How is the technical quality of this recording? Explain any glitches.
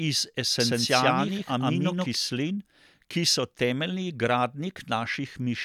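The recording has one clear glitch. From 0.6 to 2.16 s there is a doubled audio track: a second, slower capture path likely fed the same speech in again about 150 ms late at roughly equal level, so every syllable repeats as a flat, full-band echo that cuts in and out abruptly.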